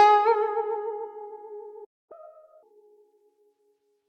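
At 1.84 s the music halts mid-flow and silence holds until 2.12 s, a gap of about 255 ms. This playback stall, likely the player starving for data or its thread being blocked, differs from a brief dropout in its length and clean, total silence.

From 2.12 s to 2.63 s the music is a catch-up at higher speed: the player resamples its backlog at 1.5 times normal rate, so tempo and pitch rise together, roughly a fifth higher, then snap back. A pure pitch shift would leave tempo unchanged.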